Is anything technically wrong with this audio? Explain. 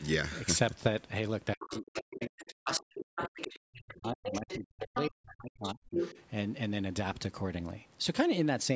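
Yes, there are two related faults, both tied to a period when both ends of the call were talking at once.

Speech suppressed in double talk runs from 1.55 to 5.83 s. The talker's speech keeps sinking, thinning and breaking off across about four seconds in total, at worst dropping by around 40 dB. The likely cause is an echo canceller that could not separate the near talker from the loudspeaker echo during overlap and turned everything down. Unlike a network dropout, the gaps follow the other voice rather than landing at random.

The other side's voice leaking through appears at 1.60–2.44, 2.71–3.59, 3.88–3.94, 4.24–4.58, 4.94–5.08, 5.64–5.73 and 5.91–6.23 s. A second voice surfaces in scraps, mostly well below the talker, though the last stretch is about as loud as the talker. This is likely residual loudspeaker echo that the canceller failed to remove from the microphone. Unlike crosstalk or a room reflection of the talker, it carries a different voice.

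The call's microphone processing is also present, with nothing above 8 kHz.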